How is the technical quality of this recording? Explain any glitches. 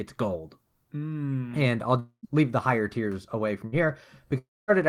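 The recording has three transmission gaps where stretches of speech go missing. Two are longer dropouts and one is a short burst.

Long network dropout, at 1.99 to 2.26 s (just before "leave the higher tiers") and at 4.38 to 4.71 s: the likely cause is a stall in the network stream. About 240 ms and 300 ms of speech are lost. The receiver stretches the last sound into a fading buzz or hiss, which then gives way to near-silence for about 100 ms and 230 ms. That silent tail is what separates these from a burst loss.

Burst of packet loss, at 3.67 to 3.75 s, right after "the higher tiers away": about 60 ms is missing. The decoder holds the preceding sound and fades it across the whole gap, so it is heard as a brief buzz or hiss with no silence before speech resumes past the lost fragment.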